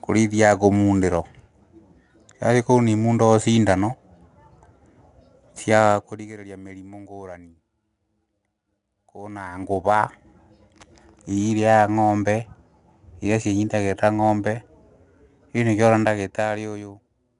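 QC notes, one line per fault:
throughout, 4-bit ADPCM compression: each sample is coded as a coarse 4-bit step from a predicted value, with the step size adapting as the level moves, so the coding error follows the speech as a gritty hiss, plainly audible on louder passages, and sharp onsets distort where the step cannot grow fast enough. Nothing reaches above 10.7 kHz, dulling the top end, which points to a stream of about 89 kbps.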